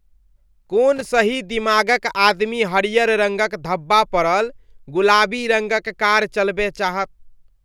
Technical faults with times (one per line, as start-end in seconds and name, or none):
0.96-1.10 loose connector crackle